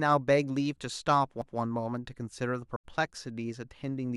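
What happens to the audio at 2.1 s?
Nothing goes wrong at 2.1 s: the speech continues intact through that moment, with no dropout, click, distortion or other audible fault.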